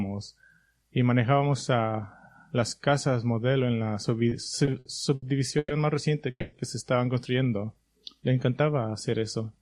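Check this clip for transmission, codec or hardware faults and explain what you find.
Three network-related faults can be heard, all after the 4-second mark.

From 4.29 s to 5.72 s there are repeated stalls (stutter). Packets kept arriving late, and the jitter buffer emptied seven times. Each time the last sound was stretched to fill the wait, about 330 ms in total. The longest gap was 120 ms. Nothing is lost, but the sound drags and catches.

From 6.30 s to 6.54 s there is a call audio freeze. The sound hangs for 220 ms as a fading continuation of the last instant, ending in about 40 ms of silence. Then it resumes where it stopped. The likely cause is packets held up in transit, which emptied the buffer and pushed the delay up by 220 ms.

From 7.43 s to 8.34 s there is a jitter buffer slow-down. The receiver was rebuilding its reserve by repeating single pitch periods and small pieces of pauses. 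This adds 93 ms, so the sound runs at 91% speed. Pitch stays the same, and sounds are drawn out.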